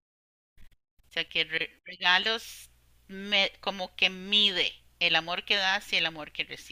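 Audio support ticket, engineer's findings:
No audible faults found in this speech recording.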